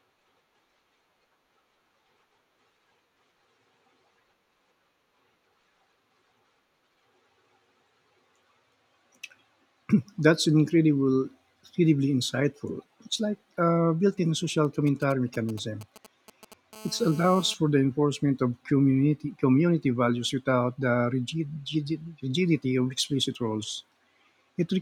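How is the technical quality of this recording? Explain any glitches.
Two bursts of interference from a nearby 2G mobile phone disturb the speech in succession.

GSM signalling bursts, 14.65 to 16.54 s: the phone's intermittent radio bursts are rectified by the audio circuit, producing galloping ticks and brief 217 Hz buzzes roughly 20 dB below the speech.

GSM phone buzz, 16.73 to 17.54 s: continuous call-mode transmission pulsing at 217 Hz is rectified into a hard, raspy, harmonic-rich buzz about 21 dB below the speech.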